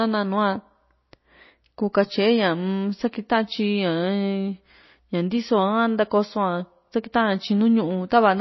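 Throughout the speech, nothing is heard above 5.8 kHz, and weak detail flickers in and out, giving a watery, swirly texture. Consonant attacks smear. This is likely MP3 compression at a starved bitrate, consistent with about 24 kbps.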